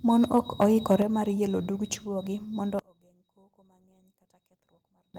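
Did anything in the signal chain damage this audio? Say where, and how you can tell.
Yes, three things. Between 0.36 and 0.65 s the loudest syllables get a harsh, crackly edge. That's microphone overload: the input was driven roughly 3 dB past full scale, so the converter flattened the tops of the peaks. Only a small fraction of samples actually got clipped, but that's enough to hear. The stage is the analogue input into the converter, and the likely cause is a mic gain set too high.

Right at 1.02 s, just before "mar yelo dug", the speech and the background both drop by about 6 dB in one go. That's the microphone volume stepped down. The jump is instant, not a smooth fade, and it lands shortly after that distorted stretch. That points to call processing, likely an automatic gain control that noticed the clipping and cut the device's input level in a single step.

From 2.79 s to 5.14 s the speech nearly vanishes, falling by about 29 dB, and what's left is a faint copy. 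That's one channel inverted. With one stereo side flipped in polarity, everything common to both channels cancels when they're summed to mono, and only the small difference between them gets through. The likely culprit is the wiring or the driver's channel handling, where one leg's polarity got reversed.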